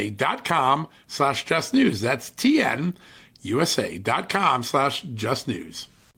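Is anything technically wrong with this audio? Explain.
No, the speech signal comes through without any audible technical fault.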